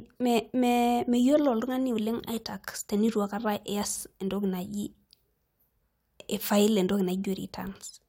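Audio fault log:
Nothing to log here; I listened to this bit of speech and didn't catch a single problem worth writing down.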